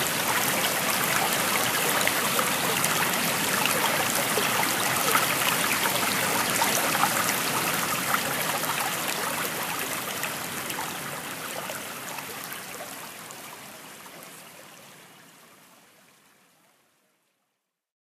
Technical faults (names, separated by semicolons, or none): none